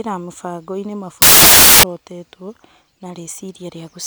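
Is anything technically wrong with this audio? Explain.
Yes. From 1.22 to 1.83 s, about 0.6 s, the speech gives way to samples built from the wrong bytes. The decoder assembles each sample with its bytes misaligned or in the wrong order, so the rapidly fluctuating low-order bits land in the most significant positions. What emerges is loud, harsh broadband noise, close to white on the louder sounds, that replaces the speech rather than sitting over it. Clipping or hiss would leave the speech audible beneath.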